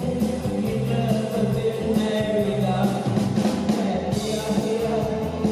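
Nothing here stands out as a technical fault; the audio runs along without any glitch worth pointing to.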